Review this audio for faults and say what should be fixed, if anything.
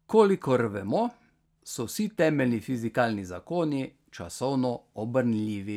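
Nothing to fix: no audible technical faults anywhere in the speech.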